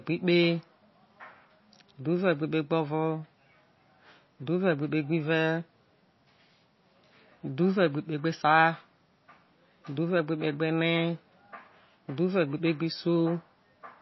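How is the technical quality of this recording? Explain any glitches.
The quality is poor: heavy data compression is plainly audible across the whole recording.

MP3 compression, likely the cause, affects the speech from start to finish. Starved of bits, the encoder has removed all treble above 5.8 kHz and let weak frequency components flicker in and out between frames, which fits a low bitrate around 24 kbps. The result sounds dull, watery and swirly, with metallic chirps on s sounds and softened consonant attacks. On a spectrogram, energy stops at a flat ceiling near 5.8 kHz, and patchy, blocky holes appear below it.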